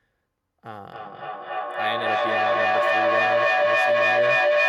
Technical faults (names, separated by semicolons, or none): feedback howl